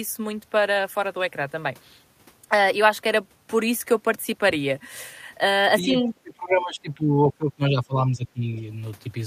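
A speech recording with speech suppressed in double talk. The speech dips sharply, by roughly 20 to 25 dB, from 5.82 to 7.17 s and again from 7.33 to 8.66 s. An echo canceller likely mistook near-end talk overlapping the far end for echo and attenuated both.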